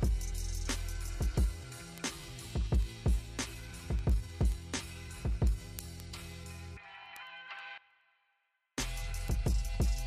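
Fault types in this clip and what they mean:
Word clock ticks: a receiving device running on its own clock slips against the sender by roughly 200 parts per million, so a single sample is dropped or repeated about ten times a second from 0.18 s to 10.03 s. Their strict regular spacing distinguishes them from random clicks.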